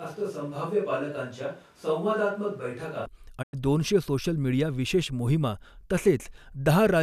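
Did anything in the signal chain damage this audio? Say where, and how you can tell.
Yes. From the very start until 3.06 s the speech already sounds roomy and hollow, thin in the bass, about 5 dB quieter than what follows, with room noise sitting only about 30 dB below the speech. At 3.06 s it snaps back to a close, full sound. That sudden shift in tone and level, without any fade, points at the capture stage. The likely cause is a switch to a distant microphone, such as a camera mic, standing in for a failed or unused close mic.

At 3.41 s the audio fades to silence over about 20 ms and stays muted until 3.55 s, a gap of about 96 ms, which fits four lost frames of roughly 24 ms each. Whatever was said in that gap is simply gone, not smeared or repeated. That is a digital broadcast dropout at the reception and codec stage. The receiver lost the signal or rejected corrupted frames, then muted until valid frames arrived again.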